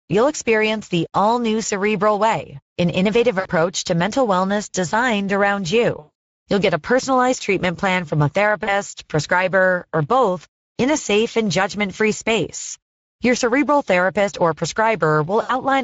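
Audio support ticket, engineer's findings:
Speex codec, whole clip: hoarse, noisy speech. Starved CELP excitation, consistent with a mid-rate Speex mode around 16 kbps.

VoIP packet loss concealed by the speech codec, 3.39–3.49 s, 5.99–6.10 s, 8.63–8.76 s, 15.41–15.62 s: fading, stretched smears. Decoder extrapolating last pitch and filter; slow recovery afterwards.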